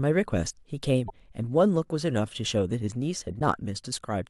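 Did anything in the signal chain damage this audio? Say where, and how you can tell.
Yes, there's damaged data in the compressed stream, so the fault sits at the codec stage, in the encoded file or stream rather than the analogue side. You get two short glitches cutting into the speech, one from 1.06 to 1.12 s and another from 3.36 to 3.41 s, each only about 55 ms long. That's the decoder hitting corrupted frames, misreading them or throwing them out, then hunting for the next valid frame header before it locks back on.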